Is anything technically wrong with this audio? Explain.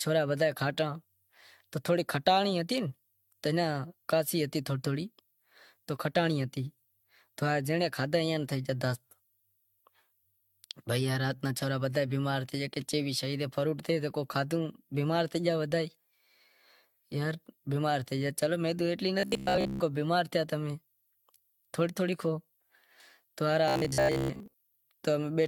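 Yes, two faults are audible.

Generation loss runs through the whole clip: the speech sounds swirly, hollow and smeared, with blurred attacks. This likely comes from re-encoding with AAC-LC at 96 kbit/s about seven times, each pass quantising on a shifted frame grid so the damage stacks.

Robotic sound from repeated short buffers occurs from 19.20 to 19.80 s, between "تو ایتلی" and "ماٹھ تھیا امیں", and again from 23.68 to 24.54 s. The speech turns into a rigid metallic buzz at 66.7 Hz. The likely cause is a stalled stream where a 15 ms chunk is looped over most of each span while the real audio is skipped.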